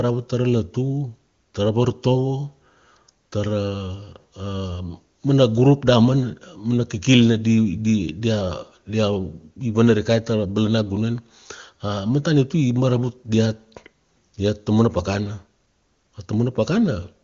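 Speech carried over AMR wideband (HD Voice) at 23.85 kbit/s, the codec's top rate, where its coding is audible faintly at most, and nothing in the recording registers as a technical fault.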